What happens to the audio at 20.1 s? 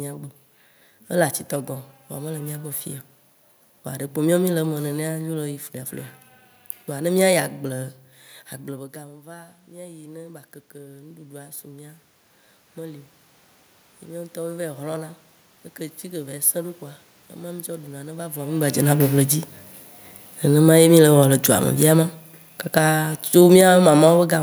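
At 20.1 s the automatic gain is falling: from 18.64 to 24.35 s the gain control judges the input too loud or its background noise too strong and pulls its gain down step by step, about 9 dB in all, so the speech sinks steadily together with the room noise behind it.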